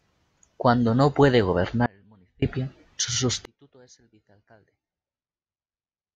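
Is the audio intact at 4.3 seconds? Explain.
No. From 3.45 s to the end, the speech collapses by about 33 dB to a faint residue. The likely cause is one channel inverted: summed to mono, the shared centre cancels. Unlike a dropout, a faint trace remains rather than silence.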